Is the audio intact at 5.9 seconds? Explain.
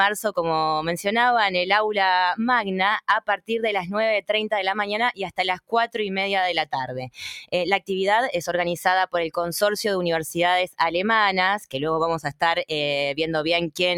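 No, not quite. From 5.56 to 5.97 s you've got sound cut by the noise suppressor. It decided that stretch was noise and pulled it down hard, about 19 dB at the deepest, for around a fifth of a second in total. Sustained and fading parts sink or get their tails clipped, while sharper onsets mostly survive.

That sits on top of a wider issue: a speech-style noise suppressor applied to music or sounds runs across the whole clip. It treats steady tones and ambience as noise, so the level keeps swinging by roughly 5 dB, giving a pumping, thinned-out feel right through this moment too.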